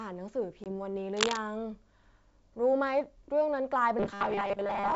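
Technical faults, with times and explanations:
0.64 to 0.67 s, packet loss on an ADPCM call: about 20 ms of speech, which fits a couple of lost packets, drops to a hard-edged silence. Afterwards the decoder's predictor and step size no longer match the sender's, so the speech comes back slightly distorted before it settles. On a waveform this is a flat gap with abrupt edges; on a spectrogram, a clean vertical blank.
1.14 to 1.38 s, cable scratch noise: for about a quarter of a second, dense, irregular crackle and rustle sits over the speech at roughly the same loudness as the speech itself. It is likely a worn cable, connector or control being moved, with its contact resistance jumping rapidly. The waveform shows ragged spiky bursts riding on the signal, and the spectrogram shows patchy broadband streaks from low frequencies up into the wideband range.
3.99 s to the end, robotic sound from repeated short buffers: the speech turns into a rigid metallic buzz at 200 Hz that still loosely tracks the syllables. 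This is likely due to audio arriving too seldom, with the last 5 ms buffer repeated to fill the gaps while most of the real audio is skipped. On a spectrogram, evenly spaced horizontal harmonics at multiples of 200 Hz replace the natural pitch movement, and the waveform shows short, near-identical cycles.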